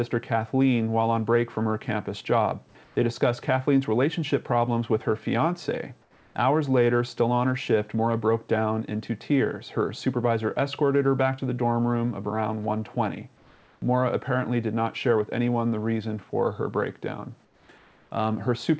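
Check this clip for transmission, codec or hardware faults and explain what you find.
One fault recurs in this call audio, whose band stops at 8 kHz as expected for G.722. Comfort noise in place of the background appears at 2.84–2.96 s, 6.02–6.35 s, 13.37–13.82 s, 17.45–17.69 s and 17.78–18.11 s. The sender likely paused transmission in quiet gaps, and the receiver synthesised noise. The detailed background, about 33 dB below the loud passages, becomes flat, featureless hiss. It drops about 3 to 6 dB, except at 2.84 s, where the level holds.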